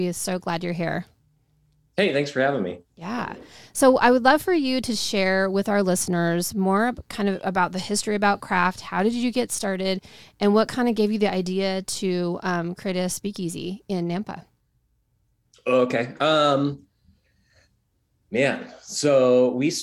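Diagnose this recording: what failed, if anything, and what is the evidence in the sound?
Nothing failed; no stage shows any audible fault.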